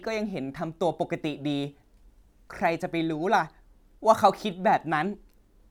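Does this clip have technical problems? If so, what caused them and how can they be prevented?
No, this clip has no technical problems, so there is nothing to trace to a cause or prevent.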